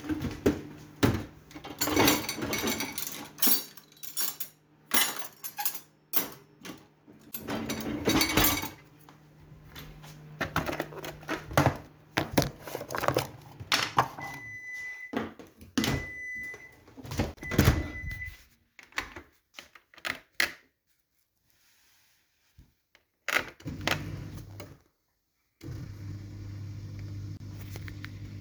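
Separately encoded pieces of this sound recording were joined without trimming the encoder's start delay and end padding. The result is a gap at a join of encoded pieces every 10 s, at 7.31, 17.34 and 27.37 s. Each is a gap of 28 to 31 ms with smeared edges, so the truly silent part is shorter, after which the sound resumes where it stopped.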